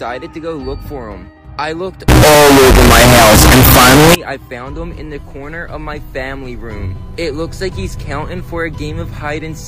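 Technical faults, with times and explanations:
2.08 to 4.15 s, float read as integer: the audio abruptly becomes a very loud, harsh, nearly square waveform sitting at an almost fixed, high level, with background noise raised to the same level as the main sound, while its pitch stays traceable. The likely cause is 32-bit float samples being read as 32-bit integers, so each sample's sign and exponent bits, not its actual amplitude, set the output level.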